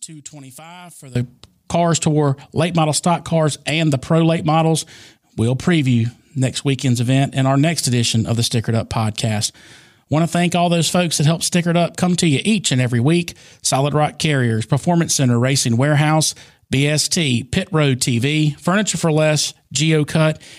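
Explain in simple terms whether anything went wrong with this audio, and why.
One channel inverted is the likely cause of the trouble from the start to 1.15 s, where the speech drops to a faint sound. If one side is flipped upside down, combining both sides cancels what they share, leaving only their small differences.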